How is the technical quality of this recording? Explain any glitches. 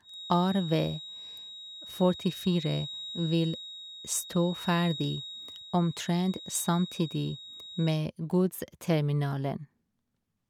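The main problem is a feedback whistle that hangs over most of the speech. From the start to about 8.04 s, a thin, steady tone at 3.8 kHz sits roughly 15 dB under the signal, swelling and fading slowly. It's likely a speaker-to-mic loop sitting right at the edge of feedback, ringing without building up.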